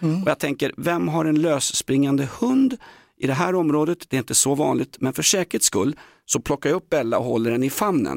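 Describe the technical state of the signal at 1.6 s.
At 1.6 s the speech signal is intact, with no audible fault at that moment.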